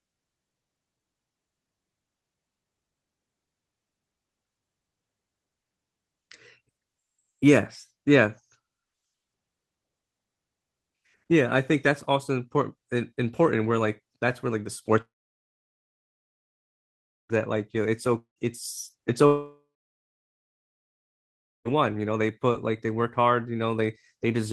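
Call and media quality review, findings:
Long network dropout, speech, three events: 15.01–17.37 s (about 2.3 s lost, roughly 2.2 s dead silence), 18.18–18.39 s (about 0.18 s, half silent), 19.26–21.68 s (about 2.4 s, about 2.0 s silent). Likely jitter buffer starved by a stalled stream. Concealment stretches the last sound into a fading buzz, then silence. Unlike brief packet-loss glitches, two of the gaps run to seconds. Unlike a mute or a stall, speech resumes mid-stream with the missing stretch skipped rather than delayed.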